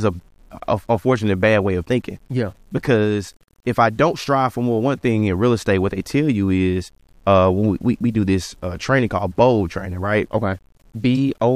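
From start to finish the speech carries a grainy, gritty distortion that tracks the voice itself, roughening the quieter syllables and sputtering as sounds fade toward silence, with the grit sitting only about 40 dB below the signal. This is low bit depth without dither: the likely cause is a signal truncated to roughly 9 bits with no dither, so the rounding error follows the waveform instead of becoming a steady, benign hiss.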